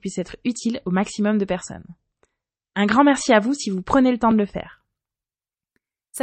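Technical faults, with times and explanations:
0.0–4.73 s, adaptive stream starting at a low bitrate: nothing above 8.3 kHz and stronger codec smear, pointing to roughly 32 kbit/s MP3, then a clean jump to something like 128 kbit/s, no gap.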